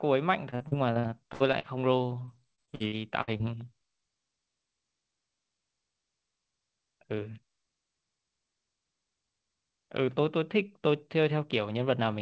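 From 0.50 to 1.66 s and again from 2.26 to 3.41 s, repeated packet loss gives choppy, robotic speech. Lost stretches, the longest 68 ms, are patched by repeating earlier sound, so the spectrogram shows smeared, copied blocks and the waveform shows stuttering, regular-looking segments.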